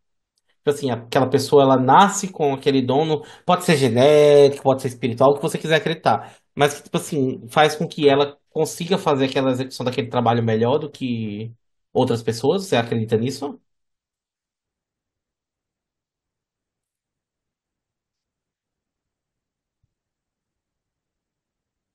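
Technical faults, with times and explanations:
Nothing to flag here, as the speech comes through without any technical faults.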